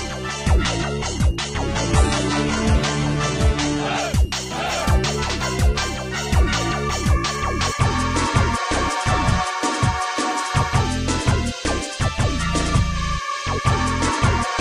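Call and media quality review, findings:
Switching supply whistle, whole clip: thin high whistle wandering between 2.65 and 2.89 kHz, roughly 25 dB under the programme. Probably a switching supply in burst mode or beating against another, drifting as load shifts.

Adaptive stream starting at a low bitrate, 0.0 to 4.0 s: dull, smeary start with nothing above 11.8 kHz and heavier codec artefacts, then a sudden clean step up at 4.0 s with no gap. Sounds like an HE-AAC start around 16 kbit/s moving to roughly 96 kbit/s AAC-LC once throughput was measured.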